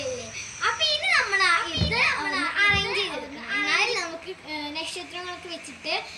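From 1.18 s to 3.94 s a doubled audio track appears: a full-band copy trails about a second behind, a few decibels quieter, likely from a slower second capture path. A spectrogram shows the same patterns repeated a second later, starting and stopping abruptly.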